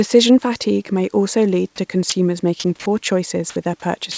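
Six brief gaps replace speech with steady noise: 1.76–1.78 s after "fatigue may also lead", 2.10–2.12 s after "may also lead to", then 2.60–2.64, 2.80–2.86, 3.50–3.56 and 4.12–4.18 s. This is likely sound dropped by the voice detector, with comfort noise filling in.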